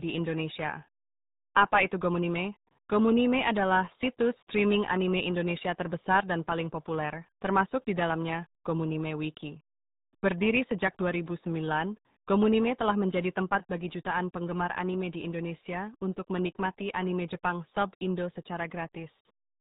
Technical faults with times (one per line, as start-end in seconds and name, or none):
0.00-19.60 RealAudio 14.4 codec